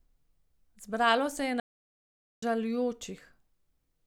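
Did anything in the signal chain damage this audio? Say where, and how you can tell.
Yes, a playback stall: the speech goes silent from 1.60 to 2.43 s, about 0.82 s, far longer than a packet-loss gap, likely a starved or blocked playback buffer.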